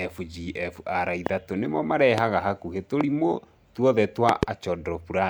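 A loud pop cuts across the speech at 1.26 to 1.29 s, again at 2.18 to 2.20 s and at 3.01 to 3.03 s, then twice in quick succession between 4.29 and 4.45 s. Each is a sharp thump standing roughly 15 to 20 dB above the speech, which carries on underneath. The likely cause is a sudden voltage step or pulse, such as from a switch or static. On the waveform each shows as a narrow spike towering over the speech, and on a spectrogram as a thin vertical line spanning all frequencies.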